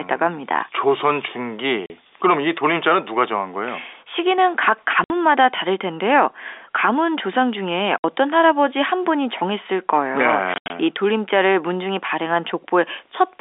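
Around 1.86 s there's a short dropout, about 40 ms of dead silence, and it happens again at 5.04 s and 7.99 s, each about 60 ms. At 10.54 to 10.70 s it breaks up into several gaps totalling about 120 ms, with the longest about 80 ms. That's packet loss filled with silence. Chunks of the stream went missing and the receiver played nothing in their place, so the sound cuts in and out abruptly. The gap lengths fit 20 ms packets. All of this sits on the usual G.711 A-law telephone band of 300 Hz to 3.6 kHz.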